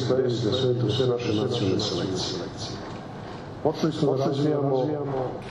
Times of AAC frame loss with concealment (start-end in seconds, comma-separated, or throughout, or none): none